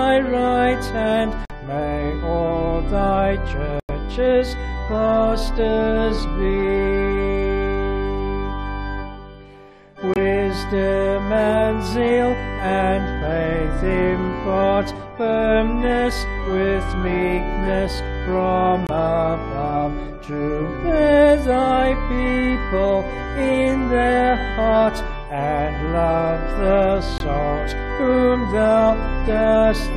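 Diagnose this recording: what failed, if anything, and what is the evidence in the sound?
The codec stage failed: corrupt frame muted. The sound drops abruptly to silence at 1.45–1.51 s, 3.80–3.90 s, 10.14–10.18 s, 18.87–18.91 s and 27.18–27.22 s, with gaps of 40 to 106 ms. Damaged compressed frames were rejected by the decoder and replaced with silence, so each hole spans whole frame lengths. The longest fits about four lost frames. Timing holds across every gap.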